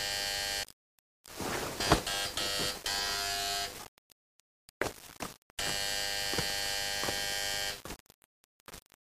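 From start to finish there's grainy distortion that tracks the sound, with the error sitting roughly 15 dB down. That's likely low bit depth without dither, with rounding pointing to about 6 bits.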